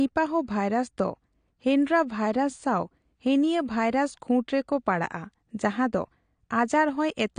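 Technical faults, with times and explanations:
Throughout, AAC compression: the speech sounds dull and smeared, and nothing is left above 9.7 kHz. Sibilants turn fizzy and sustained sounds warble. The damage is plainly audible. The likely cause is an AAC-LC encode at a low bitrate, which fits about 32 kbps. At that rate each frame gets too few bits. The encoder drops the top band and quantises the rest coarsely, leaving spectral holes that smear detail.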